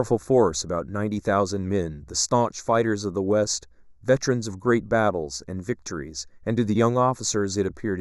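Throughout the speech, channel delay (comb filtering): one channel lags by a fraction of a millisecond before mono summing, notching near 3 kHz and leaving a hollow, dulled sound.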